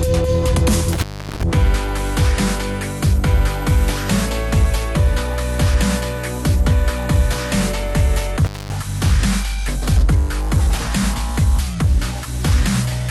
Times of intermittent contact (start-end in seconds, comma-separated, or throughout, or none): 0.93-1.43, 8.43-8.73